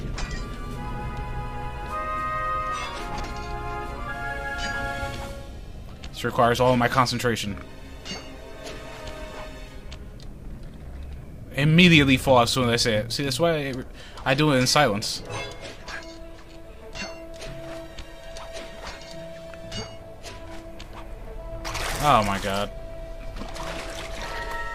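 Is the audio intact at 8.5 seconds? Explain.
Yes, at 8.5 seconds the audio plays through cleanly, with no dropout, click, distortion or other fault to be heard.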